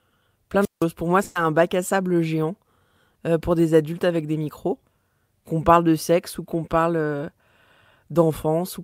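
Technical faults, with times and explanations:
0.60–0.85 s, wireless microphone squelch dropout: the analogue FM radio link weakened until the receiver's squelch cut the output, so a brief rise of hiss leads into roughly 0.17 s of near silence before the speech returns.
1.23–1.37 s, burst of packet loss: about 120 ms of consecutive audio never arrived in time, so the receiver stretched the last sound it had and faded it down, giving a held buzz or dying hiss. The speech then resumes with that stretch missing.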